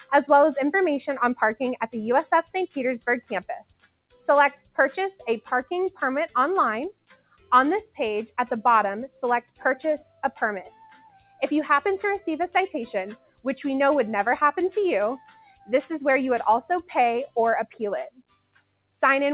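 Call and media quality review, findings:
Noise suppressor applied to music or sounds, throughout: level pumps and thins by roughly 10 dB as a speech-tuned suppressor treats sustained tones, ambience and tails as noise. The waveform envelope breathes. The spectrogram shows sustained bands fading between intact onsets. The band ends at 4 kHz, which fits a G.711 mu-law call path.

Sound cut by the noise suppressor, at 3.87–4.15 s, 4.59–4.78 s, 6.92–7.51 s, 9.42–9.62 s, 10.12–11.42 s, 13.16–13.45 s, 15.18–15.69 s and 17.27–18.91 s: held or decaying sound collapses, with dips of about 12 to 21 dB. These show as waveform troughs and dark vertical gaps on the spectrogram.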